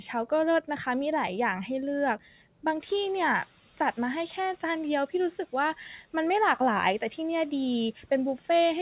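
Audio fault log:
2.80–4.78 s, noise suppressor catching up: after the room noise jumps, the lagging noise estimate lets it through, then cuts it about 5 dB over 1.98 s.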